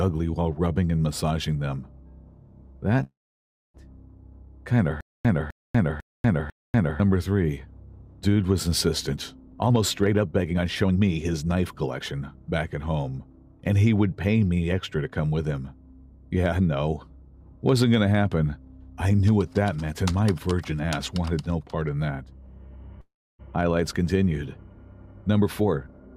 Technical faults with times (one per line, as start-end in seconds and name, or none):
3.03-3.76 call audio freeze
5.01-7.00 stutter with silent gaps
9.47-12.01 jitter buffer speed-up
23.01-23.41 call audio freeze
25.06-26.15 jitter buffer speed-up